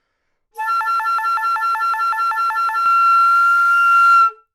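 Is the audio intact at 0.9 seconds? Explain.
No. From 0.81 to 2.86 s a 0.19 s fragment repeats back to back eleven times, a broken-record loop, likely a stalled stream resending its last buffer.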